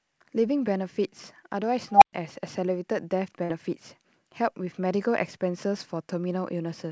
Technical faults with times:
1.92-2.13 unstable filter
3.44-3.51 burst of packet loss

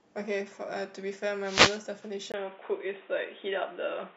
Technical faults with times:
1.42-1.82 wireless microphone noise hit
2.32-4.16 input switched to a poorer device

